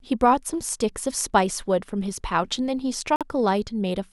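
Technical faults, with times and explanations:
3.16–3.23 s, Bluetooth stall: the speech cuts to silence for 48 ms and then carries on. The likely cause is radio interference holding back packets, so the headphone buffer ran empty and playback paused until the resent audio arrived.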